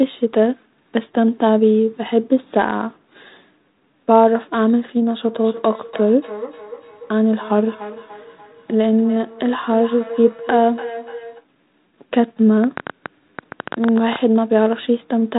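From 5.27 to 11.47 s there is feedback echo between two devices: each stretch of speech returns at about 0.3-second intervals, peaking about 14 dB below the speech. The repeats are distinct rather than a smeared room tail.

From 12.64 to 14.17 s a train of clicks, around fifteen, arrives unevenly at about 10 per second, peaking about 10 dB above the signal. The pulses are alike in shape, unlike random crackle, which points to likely interference from nearby equipment.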